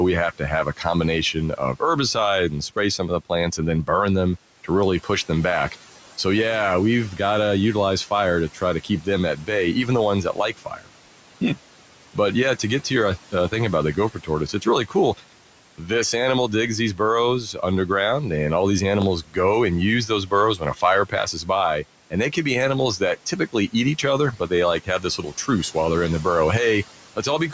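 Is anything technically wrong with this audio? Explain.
Yes, there are two kinds of fault in this speech.

Speech cut by the noise suppressor occurs at 0.38 to 5.09 s (after "we have", before "them back"), 8.54 to 12.16 s (after "to utilize fire to", before "yeah to get to"), 13.32 to 17.89 s, and 19.22 to 26.25 s. The suppressor mistakes parts of the talker for background and turns them down by up to about 10, 12, 10 and 13 dB respectively. Soft consonants and word endings, amounting to roughly four tenths of a second, most of a second, four tenths of a second and a full second in those stretches, sound swallowed or faint.

A block of digital silence occurs at 19.02 s, just after "and all these". For about 0.5 ms the sound cuts out and returns with no fade. Because it is so short, this brief gap is heard as a tick rather than as an audible hole in the sound.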